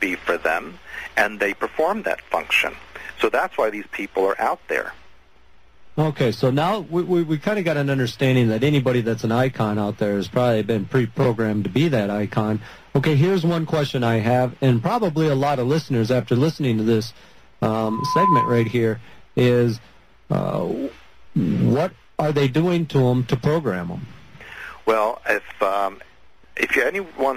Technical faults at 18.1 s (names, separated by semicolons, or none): loudspeaker feedback squeal